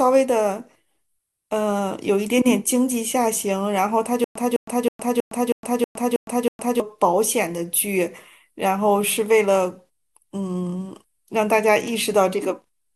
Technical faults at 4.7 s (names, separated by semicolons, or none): stutter with silent gaps